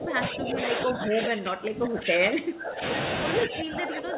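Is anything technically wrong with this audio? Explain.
Yes. Speech suppressed in double talk runs from 0.0 to 2.83 s and again from 3.46 to 4.18 s. The speech sinks by up to about 20 dB. This is likely an echo canceller, unable to separate this talker from the far side's loudspeaker echo, turning both down.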